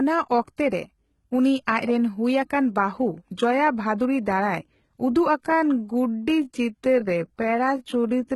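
From the start, the treble is heavily mangled and nothing comes through above 11.8 kHz, likely HE-AAC compression at a low rate, which fits something like 16 kbps.

At 0.57 s, and again from 0.69 to 0.72 s, there's pre-echo. Codec noise leaks ahead of a sharp attack, adding 15 ms and then 34 ms of hiss before it.

From 5.36 s to the end, the speech is slowed to about two-thirds speed but keeps its pitch, so it's likely a time-stretched section. The pace drags there.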